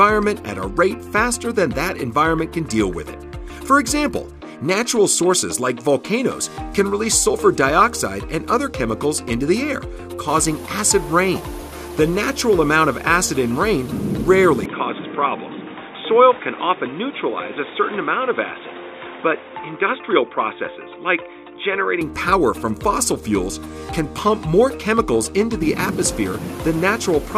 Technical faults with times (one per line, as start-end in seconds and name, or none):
14.65-22.01 input switched to a poorer device